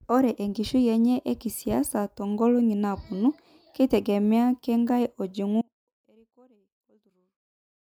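The signal path likely lost its source at 5.61 s while the chain after the break stayed live, so this speech clip suffers an audio dropout to a faint residue: the speech cuts off abruptly and only a faint leak, roughly 35 dB down, remains through the end.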